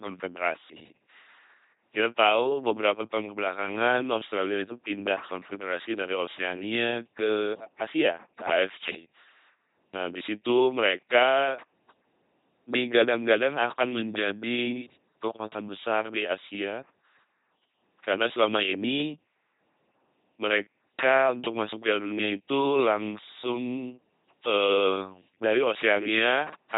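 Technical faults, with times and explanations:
Throughout, LPC-10 vocoder. The speech sounds buzzing and mechanical, like a robot, with heavy damage and nothing above 3.9 kHz. Each moment is rebuilt as fully voiced or fully unvoiced, a pulse train or noise through a small vocal tract filter, which fits a 2.4 kbit/s rate.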